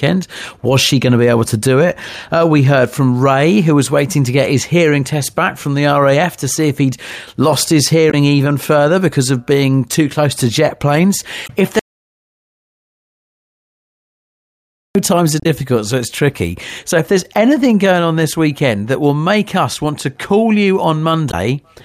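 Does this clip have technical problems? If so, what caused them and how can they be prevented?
Yes. Damaged data in a compressed stream causes short glitches at 8.08–8.14 s (after "if he'd lost his", before "even further because of"), 11.44–11.50 s (after "close to jet planes"), 15.40–15.46 s (after "times are") and 21.28–21.34 s. At each one, corrupted bytes made the decoder misread frames and lose sync until it found the next header. Storing and sending files with checksums, and verifying copies, prevents this.

An audio dropout to silence runs from 11.79 to 14.95 s. The speech cuts off and about 3.2 s of silence follows, with no room tone, so whatever was said there is lost. The likely cause is a lost input, such as a disconnected device or failed link, while recording continued writing silence. Securing cables and links and monitoring input levels during recording prevents it.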